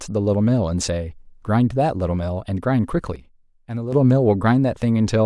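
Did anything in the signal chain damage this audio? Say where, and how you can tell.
Yes. At 3.16 s the speech and its background noise drop together by about 10 dB in a single step, then jump back at 3.93 s. That's a sudden gain jump, likely a digital gain setting in the processing chain applied instantly instead of ramped.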